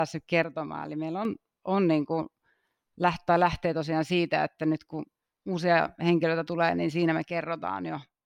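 Speech, with two abrupt level drops of about 6 dB, from 0.44 to 1.25 s and from 7.31 s to the end, most likely one channel drops out of a stereo source before it is summed to mono. Sound shared by both sides halves, and anything only in the lost side vanishes. On a waveform the envelope steps down sharply at each boundary; a spectrogram shows uniform dimming across all frequencies with hard vertical edges.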